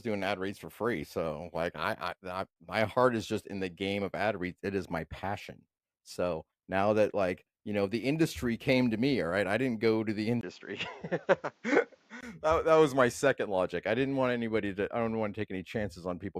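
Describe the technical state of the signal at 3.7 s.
At 3.7 s the speech signal is intact, with no technical fault present at that moment.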